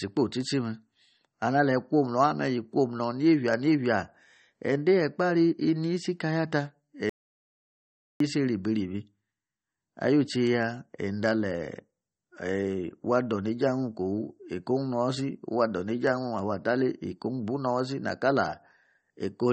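From the start, the speech carries audible MP3 compression, likely from a low-bitrate encode; the swirly, watery texture fits something around 32 kbps. Nothing survives above 8.4 kHz, and unlike a simple low-pass filter, weak detail flickers in and out between frames, smearing consonant attacks.

From 7.09 to 8.20 s, an audio dropout to silence removes about 1.1 s, likely from the input being lost while recording continued. What separates this from a natural pause is that the room tone vanishes along with the speech, leaving dead digital silence before the sound resumes mid-flow.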